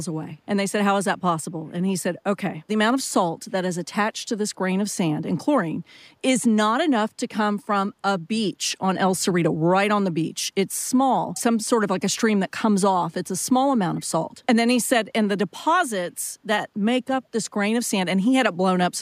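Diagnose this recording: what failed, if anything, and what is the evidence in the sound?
The fault sits in call processing: a brief echo leak at 11.34 to 11.42 s and again at 13.95 to 14.03 s, each a faint, short scrap of the speech returning about 394 ms late and roughly 30 dB or more below it. This is likely a far-end loudspeaker feeding its microphone, with the echo canceller letting residue slip through. Room reverberation would decay smoothly from the original; here a distinct copy arrives at the same fixed delay both times.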